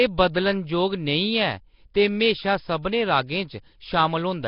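Throughout, the speech carries a rough, hissy halo and a smeared, underwater quality, with nothing above 5.3 kHz. This is likely Nellymoser compression: starved bands are filled with noise rather than left hollow, as in swirly low-bitrate MP3.

At 1.94 s a sharp attack is preceded by a short hiss about 10 ms long. This is pre-echo: block-wide quantisation noise leaks ahead of the onset. Unlike a click, it blurs what comes before the attack rather than adding a spike on it.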